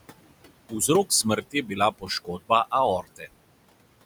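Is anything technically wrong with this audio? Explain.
Yes. Noise suppressor artifacts run through the whole clip. The suppressor pulls down about 21 dB in every band it judges to be steady noise, working frame by frame, so the room noise, which sits about 14 dB under the speech, collapses in the pauses and swells back up under each phrase. On a spectrogram the background floor looks patchy and speckled, with isolated blobs flickering in and out, rather than a smooth haze.

There is also speech cut by the noise suppressor, from 1.41 to 2.5 s and again from 3.02 to 3.28 s. In those stretches the suppressor mistook the quieter parts of the speech for noise and attenuated them along with the background, by about 19 dB in the first span and about 17 dB in the second. Roughly 400 ms is affected in the first span and about 200 ms in the second, so those syllables sound swallowed and faint. The waveform shows abrupt dips in the envelope there, and the spectrogram shows speech energy thinning or vanishing in those bands.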